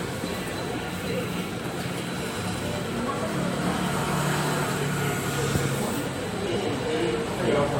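Frames out of order at 1.05–1.25, 2.35–2.55, 3.93–4.13 and 6.46–6.65 s: two 93 ms blocks swap, giving garbled flutter; waveforms show three abrupt seams per event.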